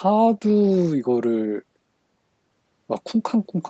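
No technical faults can be heard anywhere in the speech. The sound stops at about 8 kHz, which fits a wideband call codec and the call's microphone processing, both working as they should.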